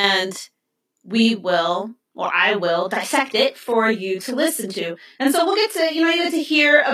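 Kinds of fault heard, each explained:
Channel delay (doubling): One channel runs 40 ms behind the other, and when the two are folded to mono the late copy sits at the same level as the original. The result is a doubled sound with a short slap behind every syllable, lasting the whole clip. On a waveform each onset appears twice, 40 ms apart. A spectrogram shows fine comb-filter striping, with notches repeating every 25 Hz.
Adaptive stream at a lower bitrate: Just after "will or I will", at about 2.87 s, the quality drops abruptly and stays low to the end, with no gap or dropout at the switch. The treble thins, and codec artefacts become more audible. This points to the player switching to a low-bitrate stream, likely because the connection slowed. On a spectrogram the energy above 14.9 kHz disappears sharply at that moment, and the upper bands look smeared.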